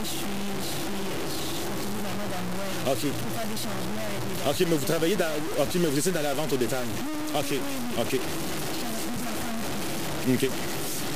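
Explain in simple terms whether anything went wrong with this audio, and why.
Throughout, the sound is grainy and gritty, most likely from low bit depth without dither (about 4 bits, truncated). Unlike steady hiss, the roughness follows the sound.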